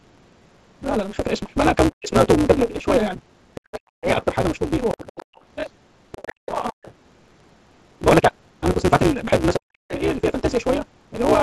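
Speech runs throughout with a steady 188 Hz buzz and a pace about 1.88 times too fast at near-normal pitch. This is a truncated block size mismatch, which fits a 256-sample read block. The speech is suppressed in double talk at 1.90–2.16, 3.58–4.09, 6.46–6.77 and 9.57–9.93 s, dipping roughly 40 dB. This is likely an echo canceller clamping down while both sides spoke. The other side's voice leaks through, quieter than the talker, at 3.56–3.58, 4.90–6.93 and 9.89–10.62 s. This is likely residual loudspeaker echo. The background is gated by the echo canceller at 5.24–5.34 s, dropping about 38 dB before recovering.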